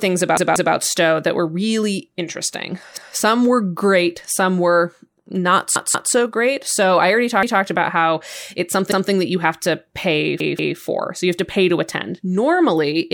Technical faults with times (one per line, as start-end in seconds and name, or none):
0.37-0.74 repeated buffer
2.97-3.16 repeated buffer
5.76-6.13 repeated buffer
7.43-7.62 repeated buffer
8.92-9.10 repeated buffer
10.40-10.77 repeated buffer